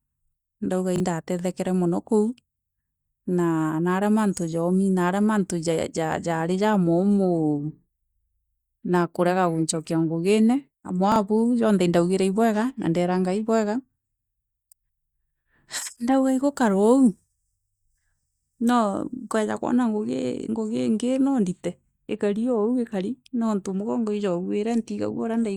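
A speech recording with two brief garbled moments, at 0.96 s just before "kere mono kou" and at 11.12 s just before "bau janthe", each lasting about 40 ms. Both are chunks out of order: the audio is handled in 20 ms chunks, and in each spot one chunk landed a single chunk late, playing after the one that should follow it. Nothing is missing, but the swapped order leaves hard joins that jumble the sound.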